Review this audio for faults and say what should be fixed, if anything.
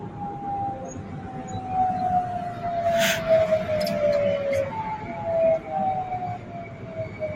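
Noise suppressor applied to music or sounds, throughout: a speech-tuned suppressor treats steady tones and ambience as noise, so levels swing by around 10 dB and sustained parts pump and thin.

Sound cut by the noise suppressor, at 0.00–0.44 s, 0.74–1.60 s and 6.37–7.35 s: the steady or decaying material sinks by about 8, 7 and 8 dB respectively.

To prevent this, bypass or disable speech noise suppression whenever the source is not speech.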